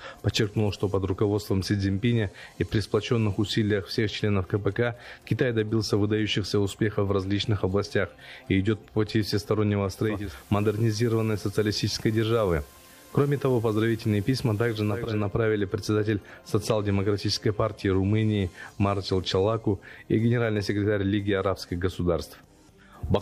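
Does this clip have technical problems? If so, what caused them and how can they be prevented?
Yes. From 9.95 s to 15.29 s there is digital radio blending to analogue. The receiver lost its digital signal. It cross-faded to the station's FM broadcast over about half a second, then later returned. FM hiss appears, roughly 30 dB below the programme. The level does not change. A better antenna position or stronger digital reception would prevent the dropout.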